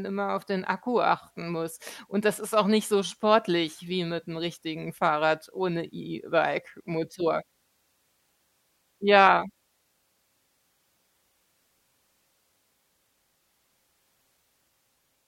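Speech, with nothing technically wrong to point to at any time.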